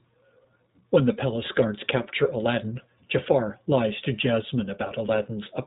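From start to finish the speech sounds muffled and plainly coarse, with a rough, synthetic edge, the plain mark of the iLBC codec. Nothing above 4 kHz survives, and each short frame, consistent with 20 ms framing, is coded independently, leaving audible coarseness.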